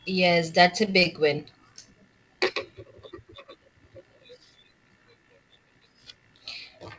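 At 0.86 to 1.07 s, right after "that's a", repeated packet loss (robotic sound) chops the speech. Four gaps, the longest 22 ms, are filled by stretching earlier sound, giving a choppy sound with pieces missing.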